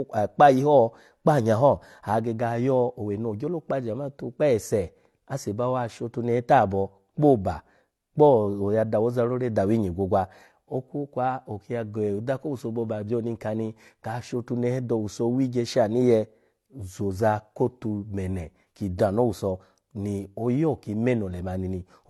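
Throughout, the speech was likely transcoded between lossy codecs, apparently AAC-LC then HE-AAC. Nothing sounds above 13.5 kHz, and both codecs' artefacts are heard together.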